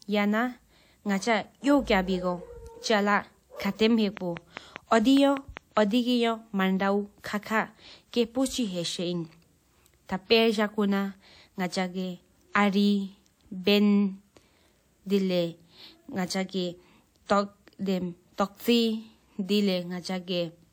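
Something was injecting a repeating electrical pulse into the signal path from 4.17 to 5.78 s, likely interference from nearby equipment or a faulty connection or power supply. The result is a train of clicks: about ten similar pops at a steady 5 per second, standing roughly 10 dB above the speech. They sound like a regular ticking laid over the talker and carry on through the gaps between phrases.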